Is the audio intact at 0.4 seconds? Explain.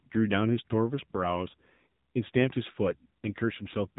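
No. At 0.4 s the AMR narrowband mobile codec damage runs throughout: nothing passes above 4 kHz, and the pulse-driven vocal-tract model makes the speech buzzy and synthetic, consistent with a low rate near 7.4 kbps. That buzz is what sets it apart from a plain telephone band-limit.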